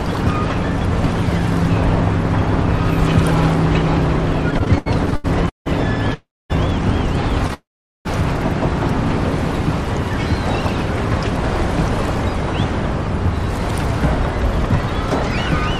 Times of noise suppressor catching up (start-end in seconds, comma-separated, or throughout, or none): none